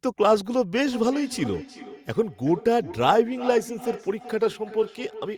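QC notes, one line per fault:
0.8–5.38 s, feedback echo between two devices: from 0.8 s to the end, the speech comes back at a steady gap of about 0.4 s, with the strongest repeat sitting about 15 dB below the direct speech. Each return sounds thinner and more ringing than the original. That's what you get when a second device in the same room replays the call and this mic picks it up again, since the echo canceller here only removes its own playback, not the other device's.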